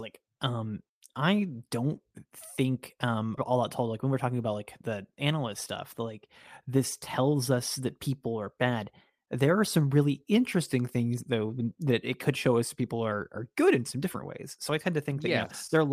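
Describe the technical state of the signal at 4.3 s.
At 4.3 s the speech is at the end of a jitter buffer speed-up running from 3.93 to 4.33 s. The receiver trimmed short pitch-period pieces, about 40 ms in all, to drain excess buffered audio, so delivery runs at 108% and sounds briefly hurried. Unlike a resampling error, the pitch stays unchanged.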